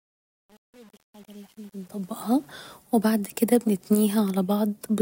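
Truncation distortion on a fade runs from 0.0 to 2.50 s, worst up to 2.29 s: the fade-in into this speech is computed without dither at a word length consistent with 8 bits, so the quiet early part turns gritty before smoothing as the level rises.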